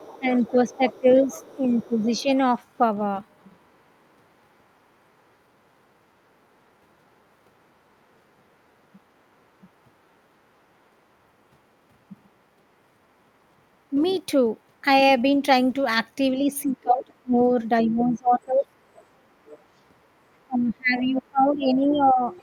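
From 0.0 to 3.7 s a faint second voice, about 25 dB below the main speech, sits underneath it. This is the other side's voice leaking through, likely loudspeaker echo the canceller failed to remove. Between 0.19 and 2.29 s the talker dips by up to about 10 dB for around a second in total. This is speech suppressed in double talk, likely the canceller ducking everything while both sides spoke. The faint leaked voice returns from 14.0 to 22.35 s. Within that stretch the talker's speech drops by as much as about 25 dB from 16.4 to 18.77 s, for roughly 1.5 s in total, and again from 20.47 s to the end.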